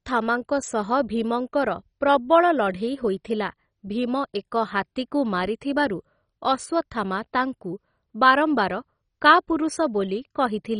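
From start to finish the speech sounds dull, with nothing above about 10.3 kHz. The remaining bands are coarse and grainy. Upper regions flicker in and out, giving a gurgling, watery edge to the sound. The likely cause is heavy MP2 compression, which fits a very low bitrate near 32 kbps. Starved of bits, the encoder drops whole upper sub-bands and quantises the rest crudely, much like low-rate digital radio.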